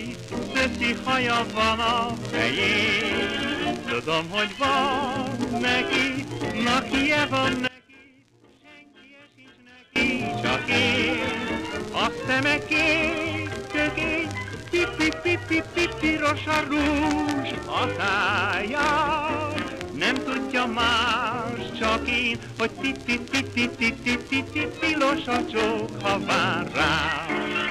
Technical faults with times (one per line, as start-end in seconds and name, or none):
7.68-9.96 one channel inverted